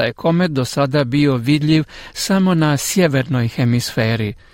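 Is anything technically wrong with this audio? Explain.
Yes. Word clock ticks sound from 0.45 to 3.65 s, about once a second. Two unlocked clocks drifting apart, roughly twenty parts per million, drop or repeat single samples, giving sharp ticks.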